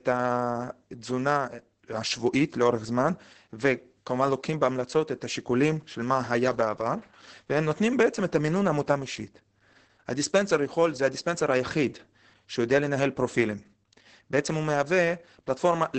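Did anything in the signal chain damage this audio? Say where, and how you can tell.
Yes. Opus voice compression runs throughout the speech, at the codec stage: nothing survives above 8.7 kHz, and the voice sounds muffled, hoarse and faintly robotic. That points to SILK in wideband mode near 10 kbps, coding the excitation coarsely and trimming the band.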